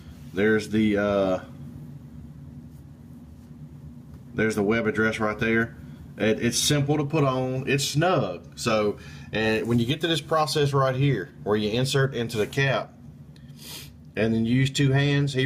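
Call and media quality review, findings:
Gain pumping, throughout. Swing around 5 dB. Dynamics squashed, loud and soft parts pulled close in level. Likely component: input gain set far too high, with a fast limiter or compressor clamping every peak.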